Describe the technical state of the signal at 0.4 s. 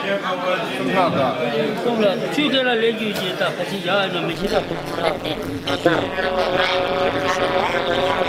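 At 0.4 s the signal is intact, with no audible fault at that point.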